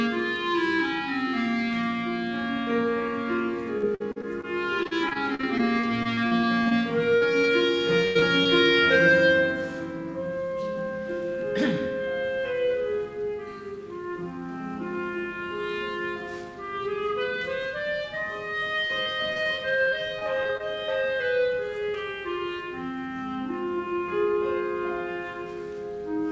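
Repeated packet loss (robotic sound) first appears from 3.78 to 4.45 s and again from 4.83 to 6.73 s. Over these stretches, packets went missing in quick succession. Each hole was patched by extending the last sound before the next hole arrived. About a quarter of the first span and a fifth of the second is filler, with holes up to 52 ms and 40 ms. The result is a choppy, metallic texture with fragments gone.

Short concealed packet loss follows at 7.17 s (about 40 ms) and 7.41 s (20 ms). Each tiny gap was bridged by carrying the preceding sound forward, pitched if voiced and as shaped noise if not, then crossfaded back into the real signal. Each one registers as a quick smear or wobble, and a brief sound can drop out entirely.

A burst of packet loss runs from 8.05 to 8.17 s, about 100 ms missing in one block. The receiver stretched the last sound and faded it as the hole lengthened. This produces a held buzz or fading hiss, after which the audio picks up further along with the middle section lost. 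Two more short concealed losses come right after, at 8.19 and 8.43 s, each about 20 ms.

Repeated packet loss returns from 18.87 to 20.62 s. Here the gaps are shorter, none beyond 25 ms, and roughly a seventh of the span is concealed.

Throughout, the G.722 call path at 64 kbps passes nothing above 8 kHz.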